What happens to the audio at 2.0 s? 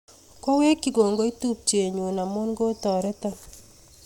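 Nothing goes wrong at 2.0 s; the speech runs through that moment intact, with no dropout, click or other fault.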